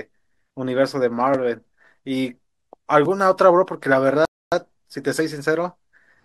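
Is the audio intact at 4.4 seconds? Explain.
No, at 4.4 seconds you're in the middle of a rebuffering stall, which runs from about 4.25 to 4.52 s. The player ran dry of downloaded audio, so the speech drops to silence and sits there for roughly 0.27 s until more data shows up. Then it picks up exactly where it left off. Nothing actually goes missing, but that dead gap is extra time wedged into the clip.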